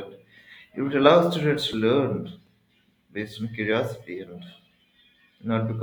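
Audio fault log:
1.72 s and 2.45–2.47 s, chunks out of order: tiny slices of roughly 5.8 ms play late, one slot behind at 1.72 s and three behind at 2.45 s. Nothing's missing, but the shuffle leaves hard joins, so each spot comes out as a brief jumbled moment.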